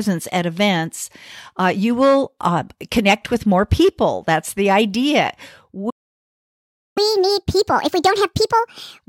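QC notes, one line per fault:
5.90–6.98 s, playback stall: the speech stops mid-flow and the output stays silent for about 1.06 s before resuming. This is likely the player running out of buffered data or its playback thread being blocked, leaving nothing to output until it recovered.
6.98–8.99 s, catch-up at higher speed: right after the stall, the speech runs at 1.5 times normal speed with pitch raised by roughly seven semitones. The player is resampling its backlog to play it faster, winning back roughly the second lost during the stall.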